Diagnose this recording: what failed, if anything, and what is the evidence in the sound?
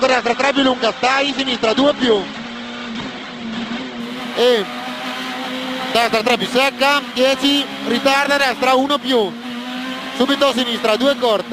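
The fault is an adaptive stream starting at a low bitrate, at the network and playback stage. From 0.0 to 4.0 s the sound has nothing above 8.2 kHz and heavier codec artefacts, then full treble returns abruptly at 4.0 s with no dropout. That pattern fits a player opening on a low-rate rendition, consistent with Opus near 16 kbit/s, and switching up, around 64 kbit/s, once its throughput measurement allowed a higher tier.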